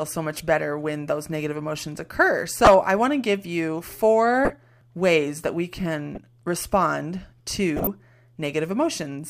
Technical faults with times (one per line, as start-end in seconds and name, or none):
0.36-0.40 corrupt frame decoded
2.64-2.67 corrupt frame decoded
4.45-4.55 corrupt frame decoded
6.15-6.18 corrupt frame decoded
7.76-7.87 corrupt frame decoded